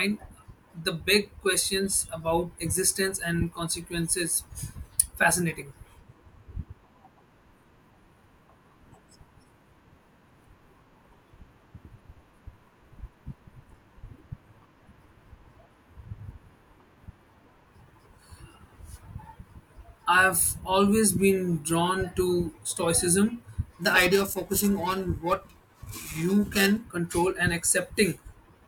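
From 23.82 to 26.83 s the speech takes on a rough, metallic edge, a grainy buzz riding on the voice that clears once the passage ends. This is periodic clock jitter: interference wobbling the converter's sample clock at a steady rate of around 1.5 kHz. Each frequency in the speech picks up sidebands spaced about 1.5 kHz above and below it, and those added tones produce the harsh coloration, heard most on the brighter parts of the voice.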